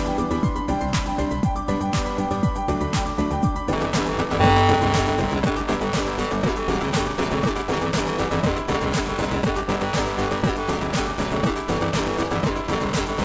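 Audio that has passed through a call codec, band-limited with nothing above 8 kHz (consistent with G.722 at 64 kbps), shows buffer tearing from 3.73 s to the end. A steady robotic buzz at 345 Hz rides on the signal, which fits a 128-sample buffer. The writer and the hardware reader have slipped and cross inside each period, so about half of every buffer replays audio roughly 5 ms old, with hard joins on both sides.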